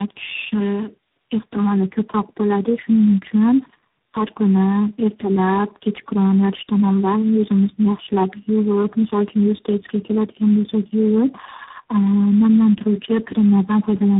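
Throughout, the speech shows tandem speech coding. It sounds as though it passed through about three low-rate speech codecs in a row, which points to AMR-NB, G.729A and G.726 links, each re-coding the last one's degraded output. The result is rough, muffled and warbly, with nothing above 3.8 kHz.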